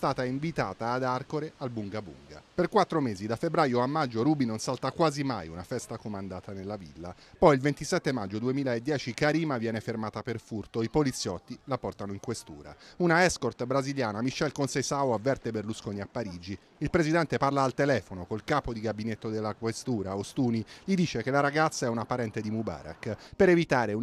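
No technical fault can be heard anywhere in the recording, so the signal stays stable and continuous throughout.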